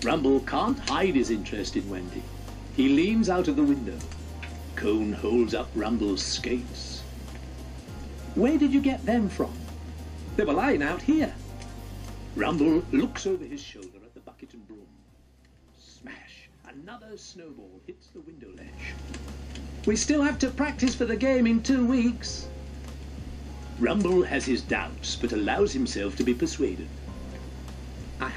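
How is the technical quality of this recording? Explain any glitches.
Two level changes carry zipper noise. From 12.92 to 14.0 s the level drops by about 20 dB. From 18.44 to 18.84 s it rises by about the same amount. Each move is made in 3 dB steps with no smoothing between them. Every step is a sudden jump in gain, so it leaves a small click. The first move ticks slowly, at around five steps a second. The second zips faster, at roughly fifteen a second.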